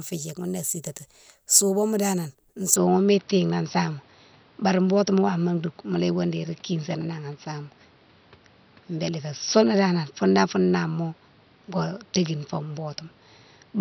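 After "sitati souboma danan", at 2.76 s, speech loses everything above 5.8 kHz and gains faint noise, likely a switch to a poorer input device.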